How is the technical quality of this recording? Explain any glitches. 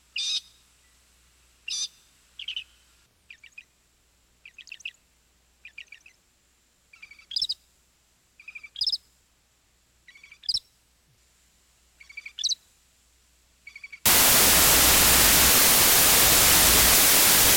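The recording breaks down badly near the end. From 14.06 s to the end at 17.56 s, the sound turns into loud, harsh broadband noise. These are samples built from the wrong bytes: the reader assembled each sample with its bytes misaligned or swapped, so the rapidly changing low bits became the large part of every value.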